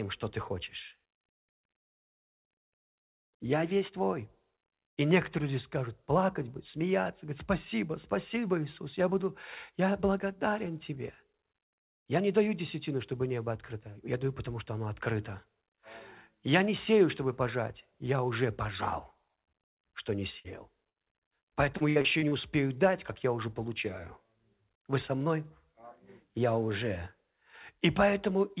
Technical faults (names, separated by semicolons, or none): burst of packet loss; repeated packet loss (robotic sound)